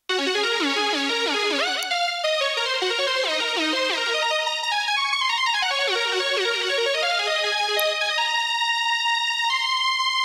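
Two sharp snaps cut into the sound at 1.83 s and 7.80 s, each lasting only about a millisecond. They are electrical switching spikes, likely from a nearby switch, motor or static discharge arcing and coupling into the audio line. Unlike a digital dropout, the sound underneath carries on without a gap, and the snaps sit on top of it. The two isolated events, six seconds apart, also rule out the steady background crackle of a worn contact.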